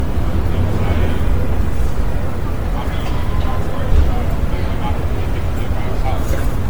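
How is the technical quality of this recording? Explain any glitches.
The recording is degraded throughout by generation loss: the sound is swirly, hollow and smeared, with blurred attacks and nothing above about 19.9 kHz. The likely cause is repeated MP3 coding, around ten passes at roughly 92 to 93 kbit/s, each requantising on a shifted frame grid. A single encode at that bitrate would not sound this damaged.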